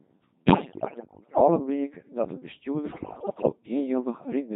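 The whole clip runs through a Codec 2 vocoder at 2.4 kbit/s, with heavy damage. Only pitch, voicing, energy and a coarse spectral envelope survive, and the decoder rebuilds the speech from sine waves, so it sounds buzzy and robotic. On a spectrogram the harmonics appear as unnaturally even, smoothed stripes under a blurred envelope. The waveform looks regular and synthetic, and its shape no longer matches the original.

From 0.46 to 1.48 s, and again from 2.92 to 3.52 s, bit errors on digital voice radio corrupt the vocoder frames. Each flipped bit mis-sets a frame's pitch, level, voicing or spectrum, so the speech jumps into bleeps, warbles and gibberish. The errors fall on roughly a tenth of the bits in the first stretch and a higher share in the second. The spectrogram shows harmonic stripes leaping frame to frame, and the waveform envelope pumps erratically.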